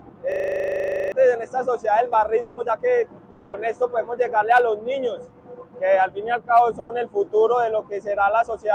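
From 0.32 to 1.12 s a system hang loop repeats one 40 ms slice of audio exactly 20 times, a steady 25 Hz buzz replacing roughly 0.7 s of material. On a waveform the identical cycle repeats like wallpaper; a spectrogram shows vertical striping at 25 Hz.

Between 2.41 and 2.60 s a long network dropout is likely behind a stretch where the last sound is extended for about 160 ms as a fading buzz or hiss, and about 120 ms of audio never returns. There is no silent gap. The spectrogram smears into a decaying, featureless band before the audio resumes further on. A similar dropout likely occurs from 3.30 to 3.56 s, carrying the fill for about 230 ms and losing about 180 ms.

A jitter buffer speed-up runs from 2.61 to 3.03 s at 111%. The receiver trims short pitch-period pieces to shed the extra delay, so the audio sounds hurried at unchanged pitch, and the waveform shows missing cycles with tiny splice points. 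The same happens from 5.40 to 5.65 s at 114% and from 8.42 to 8.73 s at 112%.

At 6.79 to 6.92 s a burst of packet loss leaves about 100 ms of concealment fading over the gap. About 60 ms of audio is skipped, seen as a short decaying smear.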